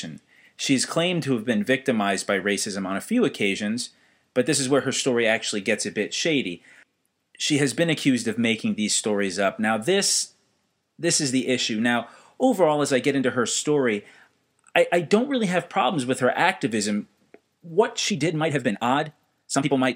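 From 18.08 s to the end at 19.95 s, the speech suddenly runs about 1.69 times faster while its pitch stays unchanged. This is a time-stretched section, likely from software squeezing the last stretch to fit a shorter length by dropping short pieces of audio. It sounds rushed. On a waveform, syllable envelopes crowd closer together. A spectrogram shows compressed phonemes with harmonic spacing unchanged.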